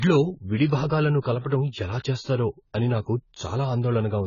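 Speech runs under heavy AAC compression for its full length: the sound is dull, smeared and warbly, with fizzy sibilants. A spectrogram shows a flat ceiling and patchy holes below, likely from AAC-LC at a very low bitrate, around 16 kbps.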